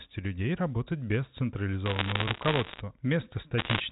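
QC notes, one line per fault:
1.86–2.80 s and 3.58–3.80 s, bit errors on a digital phone line: two bursts of sharp ticks and crackle sit over unchanged speech. The first starts just after "людей работать без", and the second is shorter, near the end. Each flipped bit corrupts a single sample. Hits on the upper bits of the G.711 code, or on the sign of a loud sample, make a large jump in that sample, so they click sharply against the 4 kHz-limited line sound. The density suggests roughly one bit in a hundred corrupted, slightly higher in the second burst.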